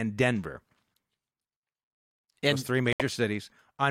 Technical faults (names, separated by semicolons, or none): corrupt frame muted